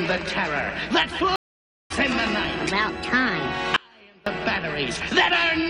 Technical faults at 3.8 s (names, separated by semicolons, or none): audio dropout to a faint residue